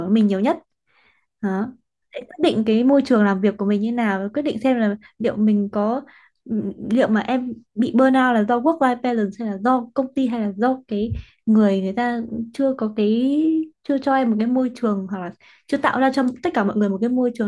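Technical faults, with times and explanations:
No technical faults can be heard anywhere in this speech recording.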